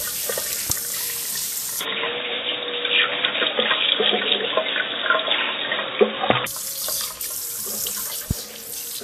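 Throughout this recording of everyday sounds, the top end is grainy and hissy, with roughened tones and smeared attacks, and nothing reaches above 14.2 kHz. That is the sound of Vorbis compression at a low setting, which fits a bitrate near 28 kbps. The encoder likely kept only a coarse spectral outline in the treble, so fine high-frequency detail is replaced by noise of similar energy, and it removed everything above the cut-off. A sharp loud pop sits on top of the audio from 0.70 to 0.72 s, peaking roughly 15 dB above the surrounding signal, and a second, harder one at 8.31 to 8.33 s reaches around 20 dB above it. In both, the sound underneath carries straight on. These are brief voltage spikes, likely from a connector, switch or static discharge, added to the signal and shaped by the circuitry after them. From 1.81 s to 6.47 s the sound turns abruptly dull and boxy, with nothing above 3.8 kHz, a level shift of around 5 dB and a new background noise floor roughly 45 dB down. 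There is no gap at either transition. This is the input switched to a poorer device, likely a narrower-band microphone or a headset in its call profile, before the original input returns.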